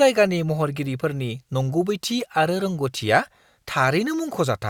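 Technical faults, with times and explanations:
No technical faults detected in the speech recording.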